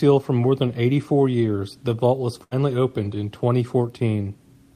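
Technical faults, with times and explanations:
2.43 to 2.53 s, burst of packet loss. Several packets in a row never arrived in time. The receiver stretched the last speech sound for 76 ms, fading it out as the gap went on. Speech then resumes with 80 ms of the sentence missing.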